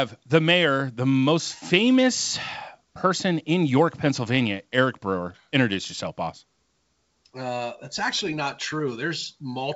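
No technical faults are audible in the speech, which comes through G.722 wideband telephone coding at 64 kbit/s with its usual bandwidth reaching up to about 7 kHz.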